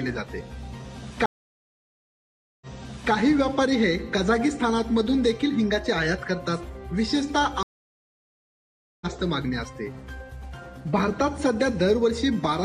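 A stream reconnect occurs twice as the connection drops and the player restarts its decoder mid-stream. At 1.26 s the sound goes silent for 1.36 s and resumes about 0.51 s earlier, repeating material. At 7.63 s a 1.38 s gap ends roughly 1.5 s later, skipping material.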